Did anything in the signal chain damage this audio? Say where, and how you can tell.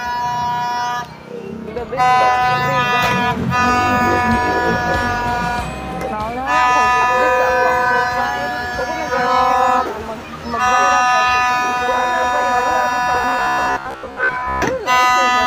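Yes. From 13.15 to 14.63 s the sound turns into a rigid 66.7 Hz buzz, likely robotic sound from repeated short buffers: a starved driver looping roughly 15 ms chunks.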